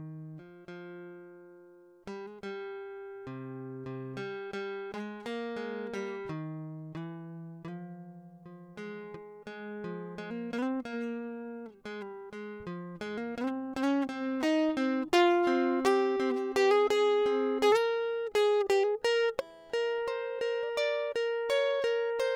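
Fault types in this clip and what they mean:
No fault types are present in this music clip.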